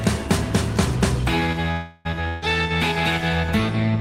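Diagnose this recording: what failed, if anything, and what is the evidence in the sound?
The first fault is at the network stage. From 1.71 to 2.07 s the sound stops moving forward, and its last moment is drawn out as a buzz or hiss that dies away over about 0.34 s. It then continues from exactly where it stopped, with nothing skipped, so everything after it plays about 0.34 s late. This is a call audio freeze, likely caused by delayed packets draining the jitter buffer while concealment filled the wait. On a spectrogram it appears as frozen horizontal bands fading out. On the waveform it is a repeating, shrinking cycle.

The second fault, a burst of packet loss, is also on the network path. From 2.28 to 2.44 s the receiver again holds the last sound and turns it down, this time for about 140 ms. When playback resumes, roughly 140 ms of audio is gone, because those packets never arrived in time to be played. 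On a spectrogram this shows as smeared, fading stripes that end in an abrupt change of texture. On the waveform it shows as decaying repeated cycles followed by a discontinuity.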